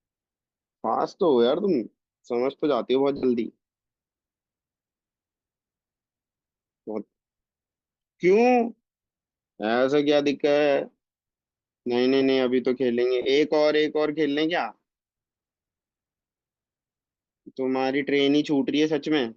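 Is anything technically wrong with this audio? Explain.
Yes. There are lost LE Audio frames at 3.17 to 3.24 s and at 13.22 to 13.25 s, gaps of about 60 ms and 30 ms that fit whole 10 ms frames. The decoder refills each gap with the last spectrum and randomised signs, so the sound becomes a brief noisy smear. On a spectrogram these show as short blurred patches, and the waveform looks noise-like there.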